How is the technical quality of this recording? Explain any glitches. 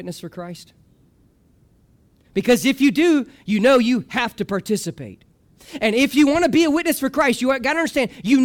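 No technical glitches can be heard anywhere in this speech recording. There is nothing that needs explaining.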